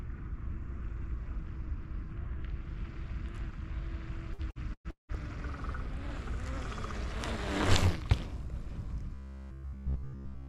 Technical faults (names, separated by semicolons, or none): repeated packet loss (robotic sound); robotic sound from repeated short buffers